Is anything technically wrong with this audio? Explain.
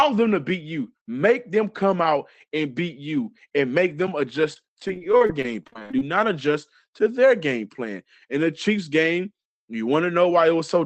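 Yes. Repeated packet loss (robotic sound) runs from 4.53 s to 6.02 s, between "you and make them" and "not adjust to their". Packets kept going missing or arriving late. Each hole, the longest about 45 ms, was patched by stretching the preceding sound, and roughly a quarter of that stretch ended up concealed this way. Because the holes come in quick succession, the speech turns choppy, with small pieces missing.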